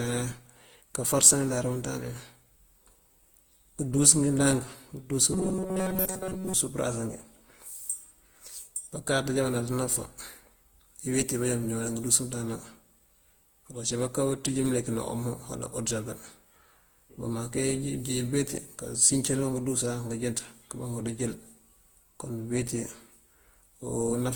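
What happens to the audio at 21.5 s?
At 21.5 s the speech carries the same swirly, smeared, hollow quality heard across the whole clip, with consonant attacks blurred. That points to generation loss, likely from around seven rounds of lossy encoding, consistent with Opus near 48 kbit/s. Each pass re-quantises on a shifted frame grid, so noise piles up. Unlike a single low-bitrate encode, the band still reaches about 20 kHz, yet the damage sounds worse than that bitrate alone would cause.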